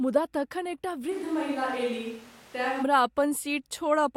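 From 1.13 to 2.82 s, speech turns hollow, roomy and about 5 dB quieter, likely a switch to a distant microphone; waveform steps down abruptly.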